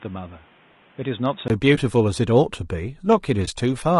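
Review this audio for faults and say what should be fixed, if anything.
Low-delay AAC compression, throughout the clip: the speech is rough and grainy, with noise filling the gaps between pitch harmonics and a thin, synthetic-sounding top band. The likely cause is AAC-ELD, the low-delay codec used on video calls. Its short frames resolve harmonics poorly and spend bits quickly, and the damage is plainly audible, which fits a bitrate around 32 kbps. Raising the bitrate or using a longer-frame codec setting would prevent it.

Input switched to a poorer device, from 0.0 to 1.5 s: for this stretch the sound is dull and boxy, with nothing above 3.8 kHz. It sits a few decibels quieter and carries its own background noise, roughly 30 dB under the signal. At 1.5 s a 20 ms silence marks the change, after which the full-band sound returns. The likely cause is the input starting on a narrower device, such as a headset's call profile, before switching to the proper microphone. 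Locking the input device before recording starts would prevent it.

AAC frame loss with muting, at 1.75 to 1.79 s and 3.45 to 3.49 s: each is a brief dip, with the sound fading out and back over about 20 ms. That fits a single lost frame each time, with the decoder zeroing its spectrum and the overlapping windows smoothing the edges. A more reliable transport or error concealment in place of muting would prevent it.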